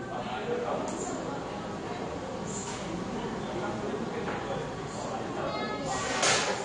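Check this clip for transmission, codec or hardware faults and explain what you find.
One codec fault runs through the whole clip. The audio is dull and smeared, with nothing above 9.7 kHz and a warbly texture, likely from AAC compression at a low bitrate around 32 kbps.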